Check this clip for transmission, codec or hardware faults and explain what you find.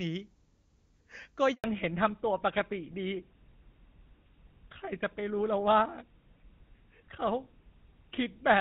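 Two faults are audible, both near the start of this speech clip.

Handover gap, from 1.54 to 1.64 s. The audio drops out for 100 ms. This happens when a call is passed from one network to another. No speech frames reach the listener while the link is switched. The sound fades within a few tens of milliseconds and stays silent until the new connection carries audio again. Whatever was spoken in that tenth of a second is gone.

Fallback to narrowband, from 1.64 s to the end. Before the gap, the speech has the extended top end of HD Voice. The clean sound fits AMR wideband at its highest rate, 23.85 kbit/s, with faint or no codec damage. After the handover, nothing above 4 kHz remains. The sound points to an older narrowband codec such as GSM full rate at 13 kbit/s. The voice turns duller and rougher, and sibilants lose their crispness.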